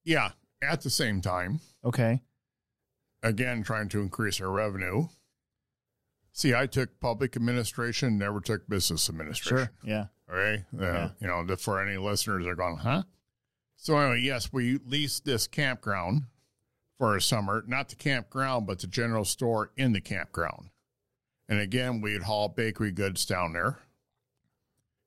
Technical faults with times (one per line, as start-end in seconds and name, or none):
0.24-24.82 clock slip clicks